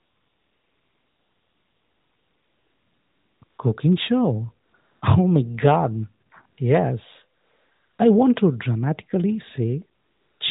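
AMR comfort noise appears from 0 to 3.42 s, 3.44 to 3.58 s, 4.66 to 4.74 s, 4.76 to 5.02 s, 6.26 to 6.32 s, 6.46 to 6.58 s, 7.38 to 7.98 s and 9.99 to 10.40 s. The phone stopped sending speech frames during these pauses. The receiver filled them with steady, smooth synthetic noise that switches in and out.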